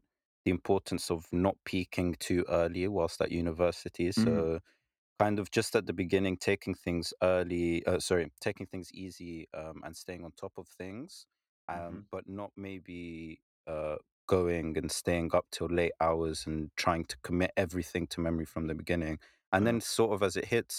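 No technical faults are audible anywhere in the recording.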